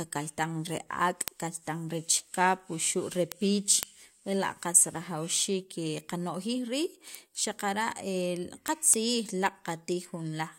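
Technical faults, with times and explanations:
0.26–10.47 s, word clock ticks: sharp clicks recur steadily through the speech, roughly every third of a second, around forty in all. The receiving device isn't locked to the sender's clock, so each slip misreads samples and drops or repeats one, consistent with a mismatch near 100 ppm.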